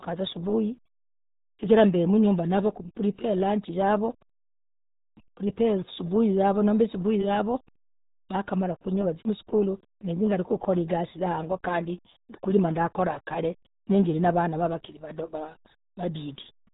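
From start to finish, the speech carries the sound of the RealAudio 14.4 codec. The damage is heavy, which fits a very low 8 kbit/s stream meant for dial-up modems. Nothing passes above 3.8 kHz. The speech sounds muffled and gargly.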